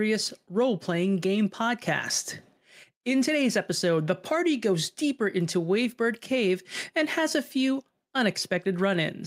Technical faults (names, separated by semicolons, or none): none